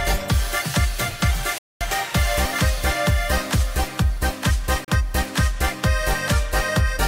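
A digital broadcast dropout mutes the audio at 1.58 s for about 0.23 s and at 4.84 s for 32 ms, each with a 3 ms fade. The gaps fit lost 32 ms frames, and the sound is skipped rather than smeared or repeated.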